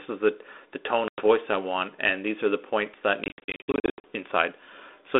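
From 1.08 to 1.27 s, between "is the the tone" and "i want and these", and from 3.24 to 4.04 s after "are the points that", packet loss on an ADPCM call punches silent, hard-edged gaps. Unlike smoothed-over dropouts, speech returns slightly distorted while the decoder's predictor and step size resync.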